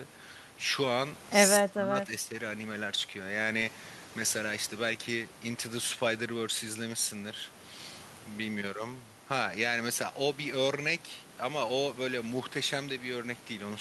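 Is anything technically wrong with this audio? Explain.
Yes. From 1.59 to 2.34 s the speech dips sharply, falling by roughly 25 dB at its deepest and breaking up for about half a second in total. This is likely speech suppressed in double talk: the echo canceller confused this talker with loudspeaker echo and attenuated both.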